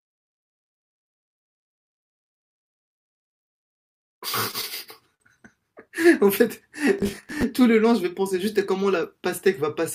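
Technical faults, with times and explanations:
4.51 to 4.56 s and 5.15 to 5.23 s, short stall from a late packet: a packet arrived late, the jitter buffer ran dry, and the receiver held the last bit of speech until it came, about 19 ms the first time and 54 ms the second. Nothing is lost; the sound is simply drawn out, and everything after is delayed by the same amount. On a spectrogram the harmonics run flat and unchanging across each hold. The waveform shows a small repeated cycle.
6.99 to 7.43 s, processor overload crackle: the processor missed its deadline again and again for nearly half a second. Each time, a chunk of old audio was replayed in place of the new one. The spacing of the ticks fits buffers of around 10 ms, with a few dozen missed in a row. The result is a gritty tearing over the speech. The waveform shows hard-edged discontinuities. The spectrogram shows closely spaced vertical broadband streaks across the whole stretch.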